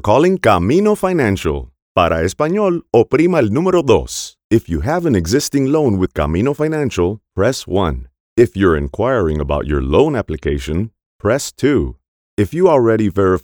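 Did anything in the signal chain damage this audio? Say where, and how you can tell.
No, nothing in the signal chain damaged this audio.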